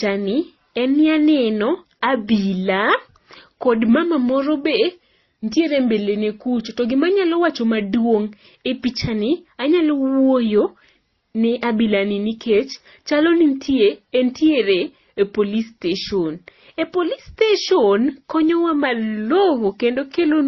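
It's a speech clip, and the whole thing sounds like transcoding between lossy codecs: nothing above 6.3 kHz, smeared, swirly low-bitrate MP3 artefacts, and a second codec's own coding noise on top, which fits a likely chain of MP3 into Opus at low bitrates.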